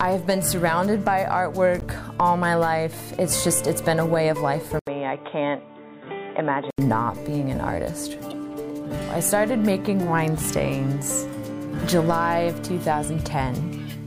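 At 1.80 to 1.83 s and again at 8.30 to 8.33 s, damaged data in a compressed stream makes the decoder misread frames and resync, giving a brief glitch. A spectrogram shows a thin vertical smear of broadband garbage, and the waveform shows a jagged discontinuity.

From 4.79 to 6.78 s the sound turns dull and boxy, likely from the input switching to a poorer device. An 80 ms gap marks the switch. The spectrogram shows nothing above 3.8 kHz, the waveform drops a few dB in level, and a new noise floor sits roughly 40 dB below the signal.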